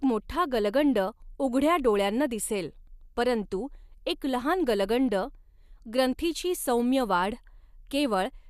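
Nothing in the speech stood out as a technical fault on listening.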